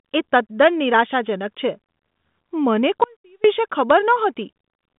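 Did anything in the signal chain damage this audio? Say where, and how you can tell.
Yes. An audio dropout to a faint residue runs from 3.04 to 3.44 s. For about 0.4 s the speech cuts abruptly to a faint leak roughly 30 dB down, while the telephone-band G.726 path at 40 kbit/s stays live. The likely cause is a break in the wanted signal while the path after the break stayed live.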